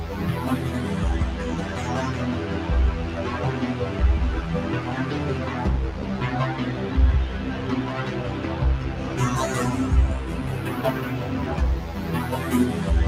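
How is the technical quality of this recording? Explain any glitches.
The recording has one persistent fault. A noise suppressor applied to music or sounds runs throughout: a speech-tuned suppressor treats held tones, ambience and decay tails as noise and pulls them down by roughly 5 dB, while attacks pass. The result is audible pumping and thinned sustains.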